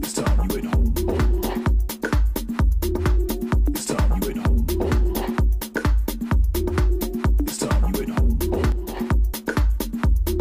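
From 8.72 to 8.97 s, one channel drops out, likely because one side of the stereo feed was briefly lost. In the mono sum, the shared content falls abruptly by about 6 dB for a quarter second, and anything carried only on the missing side vanishes.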